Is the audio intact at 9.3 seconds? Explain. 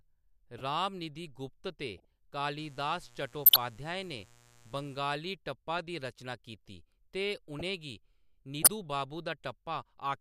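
Yes, the audio is intact at 9.3 seconds, with no fault at that point in the clip.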